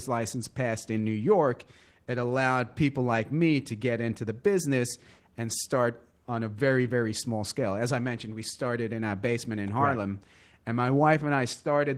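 From start to finish the speech has a hoarse, slightly buzzy grain with a faint robotic edge, and the upper register sounds thin and smeared rather than crisp. This is Opus voice compression working at a low rate. The character points to roughly 16 kbps in hybrid mode, with linear prediction coding the main band and a sparse transform layer above 8 kHz. Too few bits reach the excitation, so the detail turns coarse.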